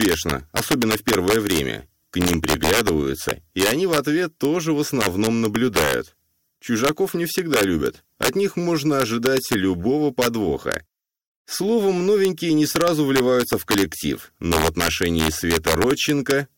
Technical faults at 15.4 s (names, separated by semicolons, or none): integer overflow